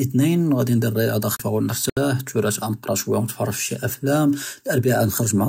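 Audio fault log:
1.36 to 1.40 s, CD skip: the speech mutes for about 30 ms and then resumes from a different point in the recording rather than where it stopped. The laser has jumped to another turn of the disc's spiral, and the player briefly mutes while it relocks. Unlike a dropout, the material on either side does not join up. The continuation is displaced, as though a piece were cut out or repeated.
1.90 to 1.97 s, Bluetooth stall: the sound drops to 72 ms of silence and then picks up again. The likely cause is a Bluetooth link where interference held back packets, so the headphones' buffer ran empty and playback waited for the resent data. What separates this from the skip above is that it pauses and carries on rather than jumping to another part of the recording.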